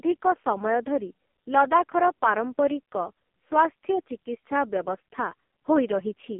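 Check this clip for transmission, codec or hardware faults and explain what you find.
One fault runs through the whole clip: AMR narrowband mobile codec damage, and it is heavy. Throughout, the speech sits in a 200 Hz to 3.4 kHz telephone band with nothing above 3.4 kHz. The pulse-driven vocal-tract model sounds buzzy and synthetic, which points to the lowest AMR-NB mode, around 4.75 kbps. That synthetic buzz separates it from a simple band-limited line.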